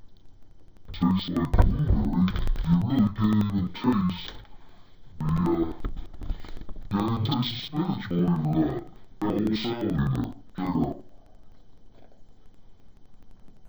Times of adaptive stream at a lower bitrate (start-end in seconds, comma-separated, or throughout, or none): none